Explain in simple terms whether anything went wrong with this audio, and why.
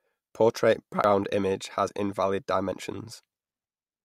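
Yes. The speech jumps ahead at 1.04, 1.88 and 2.72 s, losing about a tenth of a second first, then less. This is likely a dropped buffer (overrun).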